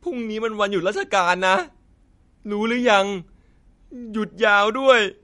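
A speech recording with plainly audible codec damage from start to finish. Nothing is present above 11.1 kHz, so the top of the spectrum is sharply cut off. Quiet detail sounds watery and swirly, as weak frequency components drop in and out from frame to frame. S sounds pick up a metallic chirp, and attacks are smeared. The likely cause is MP3 compression at a bitrate that starved the encoder, which fits roughly 48 kbps.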